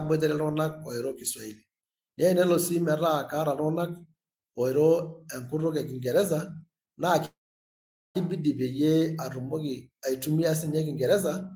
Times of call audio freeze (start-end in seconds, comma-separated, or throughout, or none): 7.25-8.17